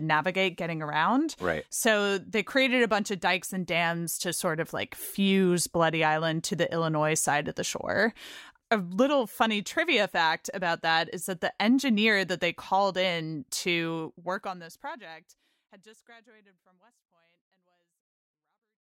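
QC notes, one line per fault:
No faults heard anywhere in the speech.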